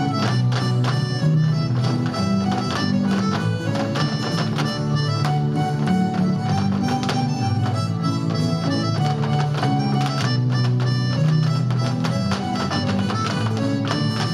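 No technical faults are audible.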